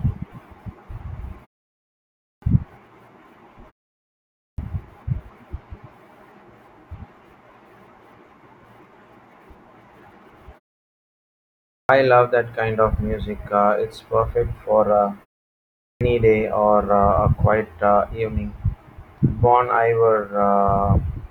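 Clipped start after a pause at 2.11, 4.31, 11.58 and 15.74 s. The output device sleeps in silence and wakes late. About 0.27 to 0.31 s of speech is lost each time.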